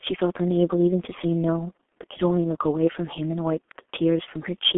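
From start to finish the speech carries heavy G.723.1 codec damage. Energy stops at about 3.6 kHz, with the line band confined to roughly 250 Hz to 3.4 kHz, and the coarse, hoarse texture fits a rate near 6.3 kbit/s. Long 30 ms frames smear consonants and make the voice model lag behind fast changes. Plain narrowband filtering would only muffle the sound. This adds grainy roughness and blurred onsets on top.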